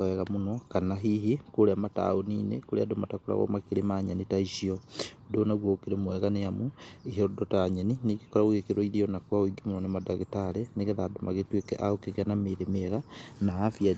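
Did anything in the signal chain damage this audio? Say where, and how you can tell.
No, nothing in the chain damaged this speech.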